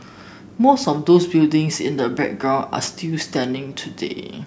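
Nothing in the speech stood out as a technical fault on listening.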